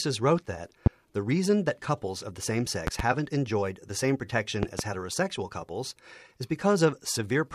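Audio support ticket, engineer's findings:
Loud pop, likely a voltage step or static discharge in the chain, filtered by the circuits after it. Sharp single pop at 0.86–0.89 s, about 20 dB over the speech. Double pops at 2.87–3.02 s and 4.63–4.82 s, about 15 dB up. Speech continues underneath.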